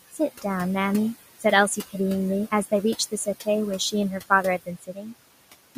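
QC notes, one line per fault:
Throughout: noise suppressor artifacts. The suppressor pulls the steady room noise, which sits about 14 dB under the speech, down by about 18 dB frame by frame. The background sinks in the gaps and creeps back under the talking.
0.12–0.45 s, 1.68–1.94 s, 2.98–3.47 s and 4.58–5.14 s: speech cut by the noise suppressor. Softer bits of speech got mistaken for noise and ducked with it by about 15 to 19 dB, so consonants and endings go faint. The last one swallows about 0.4 s.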